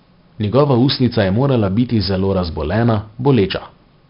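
A gritty hiss rides on every loud syllable from start to finish, with rough edges on sharp consonant onsets and nothing above 5.3 kHz, so the speech sounds dull. This is heavy 4-bit ADPCM compression: coarse prediction steps that lag sudden changes, consistent with roughly 44 kbps.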